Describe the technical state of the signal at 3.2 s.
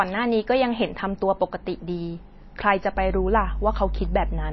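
At 3.2 s a steady low drone at 50 Hz sits under the speech, strong enough to come within a few decibels of it. This mains hum runs from 2.94 s to the end of the clip, the power line leaking into the signal through a ground loop or nearby transformer.

The speech at this point also sounds dull and watery, with nothing above 5.8 kHz and plainly audible swirling on the sibilants. The likely cause is MP3 compression at a low bitrate, around 24 kbps. Short of bits, the encoder cuts the treble and drops weak frequency lines that flicker from frame to frame.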